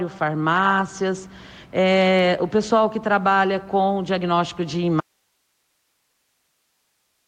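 An audio dropout to a faint residue begins at 5.0 s and runs to the end; the signal was likely lost upstream, leaving only hiss far below.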